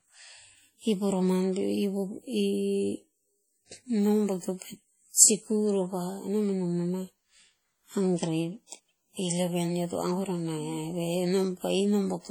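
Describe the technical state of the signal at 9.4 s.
At 9.4 s the speech carries heavy transform-codec damage that runs through the whole clip, likely WMA compression at a rate that fits roughly 32 kbps. Long transform blocks smear quantisation noise over tens of milliseconds, and weak spectral lines are zeroed, so the sound rings and turns washy, with a hiss that swells and fades with the signal. Unlike steady background noise, that hiss tracks the level of the speech.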